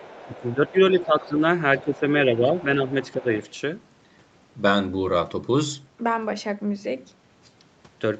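From the start to 1.27 s, a faint second voice sits under the speech, about 25 dB below it. This is the other side's voice leaking through, likely from a loudspeaker whose sound the echo canceller did not fully remove. From 0.25 to 1.42 s the main speech dips by up to about 10 dB, for roughly a second in all. This is speech suppressed in double talk. With both sides talking, the canceller likely could not tell its own talker from the echo, so it turned everything down. The leak returns from 1.76 to 2.0 s, again about 25 dB down. A second suppression runs from 1.83 to 3.3 s, with similar dips of about 10 dB covering somewhat less than a second. Brief scraps of the other voice come through from 2.59 to 2.64 s. A last stretch follows from 3.01 to 3.5 s, quieter at about 30 dB below the speech.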